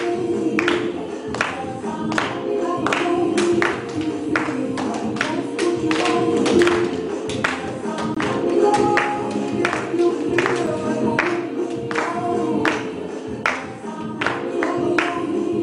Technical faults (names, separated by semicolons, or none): block of digital silence